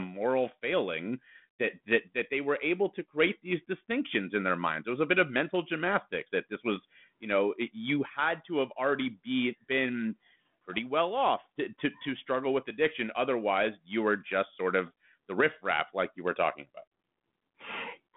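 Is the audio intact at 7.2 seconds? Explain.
Yes, the audio is intact at 7.2 seconds, with nothing there beyond the narrowband telephone character of the line.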